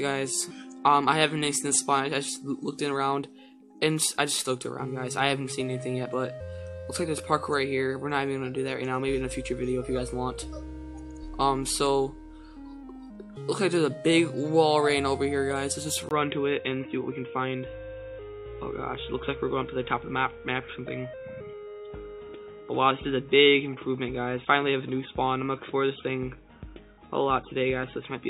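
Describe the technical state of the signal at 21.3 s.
At 21.3 s the sound is dull and boxy, with nothing above 3.8 kHz and a faint new background noise sitting well below the signal. The loudness is about the same as before. This narrowed, recoloured state begins at 16.09 s, just after a 20 ms dropout, and lasts to the end of the clip. The likely cause is an input switched to a poorer device mid-recording, one whose narrower passband and own noise floor replace the original pickup.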